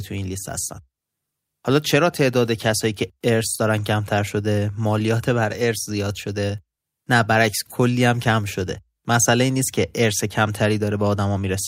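No audible technical faults present.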